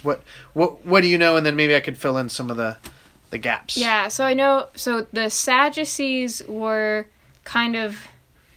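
No technical faults are audible.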